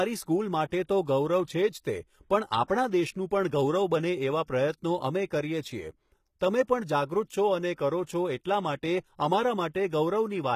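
From start to finish the speech has a gritty, metallic top end. Sibilants sound lispy, and nothing reaches above 14.9 kHz. The likely cause is HE-AAC compression, at a rate the damage suggests is around 20 kbps. Only the lower spectrum is truly coded, and the treble is rebuilt by copying lower bands upward under a coarse envelope, so the upper harmonics fail to line up with the real ones.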